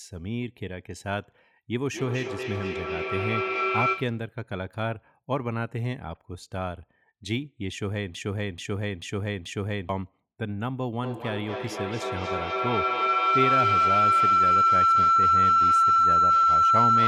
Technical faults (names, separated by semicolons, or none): feedback echo between two devices; broken-record loop; feedback howl